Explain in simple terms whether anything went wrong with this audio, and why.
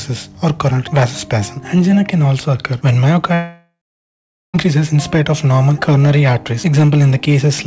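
Something went wrong from 3.34 to 4.56 seconds. The sound stops and a fading buzz fills the gap, then near silence for about 0.8 seconds. This is a long network dropout, likely data lost on the call line. About 1.2 seconds of audio never returns.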